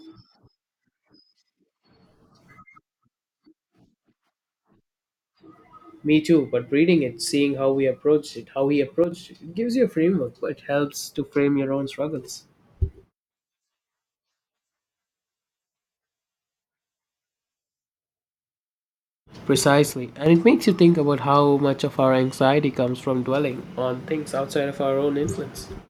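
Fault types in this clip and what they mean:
One channel drops out: the speech abruptly falls about 6 dB in level, briefly from 9.04 to 9.12 s and again for about a third of a second from 19.93 to 20.26 s, then snaps back to full strength. The likely cause is that one side of a stereo feed went silent. When the two channels are summed to mono, sound shared by both loses half its contribution, and anything present only on the lost side vanishes.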